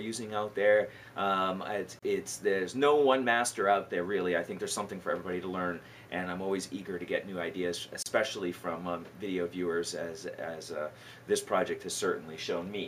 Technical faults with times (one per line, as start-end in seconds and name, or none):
1.99-2.02 gap at a join of encoded pieces
8.02-8.06 gap at a join of encoded pieces